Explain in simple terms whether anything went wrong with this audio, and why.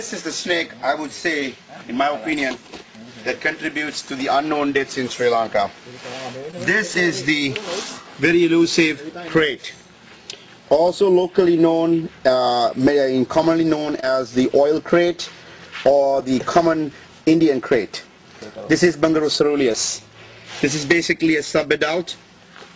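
Five times in this call, a small piece of audio, about 20 milliseconds each, arrived too late for the receiver to use. This is short concealed packet loss: the receiver patched each gap by stretching out the sound just before it, then blended back in. You hear a brief smear or wobble at 1.40–1.43, 6.51–6.54, 14.00–14.04, 16.20–16.29 and 19.72–19.76 seconds. At 16.20 the patch also adds a few extra milliseconds, so the sound slips slightly late there.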